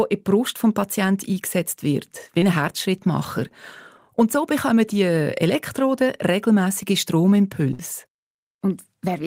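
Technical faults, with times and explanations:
2.38–2.42 s, short concealed packet loss: Just after "eingesetzt wird wie", about 30 ms of audio never arrived in time and the receiver covered the hole by extending the preceding sound, then crossfading back into the real signal. The patch is brief enough to pass as a smear or wobble rather than a dropout, but the 30 ms of original speech it replaced is gone.
7.73–7.79 s, burst of packet loss: Roughly 50 ms of consecutive audio was lost or arrived too late to be played. The receiver continued the last sound across the gap and attenuated it as the fill went on, which comes across as a short held buzz or fading hiss in place of the real speech. Playback then picks up again further along, with the 50 ms in between simply missing from the utterance.
8.17 s, sudden gain jump: At this point the level of both the speech and the background noise steps down together by about 4 dB and stays there until the clip ends. 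Because the change happens between one sample and the next rather than along a ramp, the drop is abrupt and can carry a click. The likely cause is a gain setting or bit shift applied instantaneously in the digital path.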